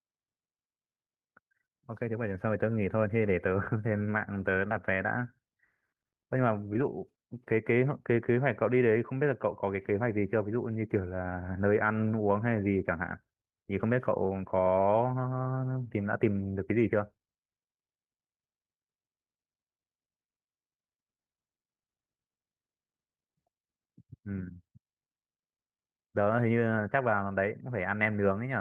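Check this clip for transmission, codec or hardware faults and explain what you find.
Three short gaps show short concealed packet loss. They fall at 4.68 to 4.71 s, 6.73 to 6.76 s and 12.12 to 12.14 s. About 20 ms of speech went missing in the first, and 10 ms in each of the others. The packets arrived too late for the decoder. The receiver extended the preceding sound to cover each hole, then blended back into the real speech. Each one is heard as a tiny smear or wobble. A brief consonant may drop out.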